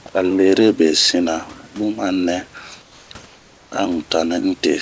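From 2.82 to 3.10 s and 3.26 to 3.72 s, the room background becomes steady, featureless hiss, about 2 to 3 dB quieter: likely comfort noise from discontinuous transmission.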